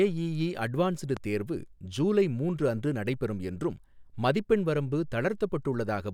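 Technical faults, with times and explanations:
1.17–1.19 s, loud pop: one sharp pop, well above the speech, just before "தேர்வு ஜூலை மூன்று அன்று". Likely a brief voltage spike. Speech continues underneath.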